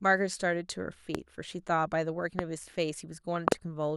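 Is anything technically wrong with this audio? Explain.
Yes, the speech is interrupted by loud pops at 1.15 to 1.17 s, 2.39 to 2.41 s, and 3.48 to 3.54 s, where two arrive in quick succession. A sudden voltage step or spike, likely from a plug, switch, static discharge or driver glitch, lands on the signal and is shaped by the circuitry after it. Each is a sharp thump roughly 20 dB above the speech, with the double pop nearer 25 dB, while the speech continues underneath.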